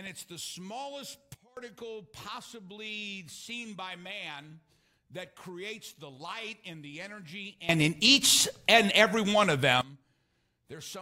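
At 1.34 s the level drops abruptly by about 22 dB until 1.57 s. From 7.69 s to 9.81 s it leaps up by about 19 dB. Both are sudden gain jumps, likely from gain applied without a ramp. The background noise steps with the sound instantly, unlike a fade or compressor pumping.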